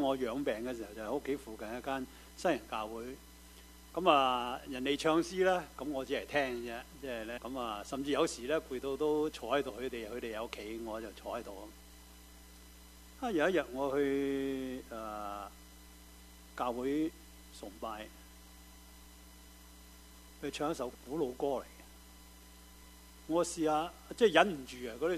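Damaged data in a compressed stream shows up as short glitches around 7.36 to 7.39 s, then 9.69 and 20.92 s: the decoder loses sync and hunts for the next frame.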